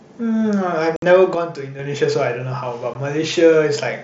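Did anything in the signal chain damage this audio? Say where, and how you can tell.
Yes. At the wireless network stage, unconcealed Bluetooth headset packet loss leaves abrupt silent holes at 0.96 to 1.03 s (60 ms) and 2.94 s (15 ms), with hard edges rather than smeared codec artefacts.

From 1.35 to 1.79 s the level falls abruptly by about 6 dB, then recovers. This is likely one channel dropping out in playback or wiring, since the drop is an exact halving rather than a fade.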